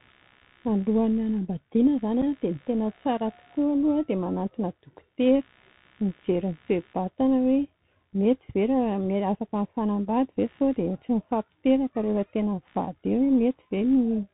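Throughout the speech, Bluetooth CVSD headset codec damage is plainly audible. The one-bit delta modulator, consistent with a 64 kbit/s CVSD link, cannot keep pace with steep waveform changes, so sibilants turn scratchy and a grainy hiss sits under the voice. A spectrogram shows a hard ceiling at 4 kHz, and the waveform shows slope-limited, staircase-like edges on loud high-frequency passages.

Computer activity noise also runs for the whole clip, a buzzy pulsing at roughly 70 Hz, about 40 dB below the speech. It comes from load changes in the computer disturbing the audio circuit's shared ground, so it follows the machine rather than the voice. On a spectrogram it forms faint evenly spaced vertical ticks or a low harmonic comb that continues through pauses.

At 2.22 s there is unconcealed Bluetooth headset packet loss: 7.5 ms of speech drops out and is replaced by silence or an idle pattern, consistent with a single lost packet. 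The hole has abrupt edges, heard as a momentary chop, with the voice briefly quieter afterwards. The waveform shows a sharp-edged flat gap, and the spectrogram a thin vertical blank stripe.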